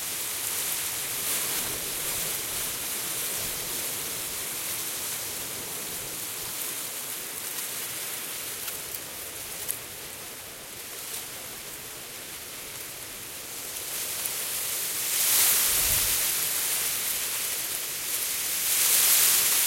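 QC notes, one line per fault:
No faults are audible in this clip of sounds.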